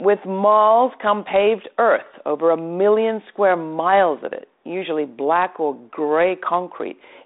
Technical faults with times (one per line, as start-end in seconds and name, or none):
none